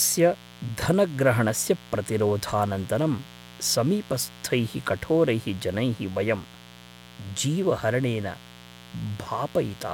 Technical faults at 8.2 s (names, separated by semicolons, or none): mains buzz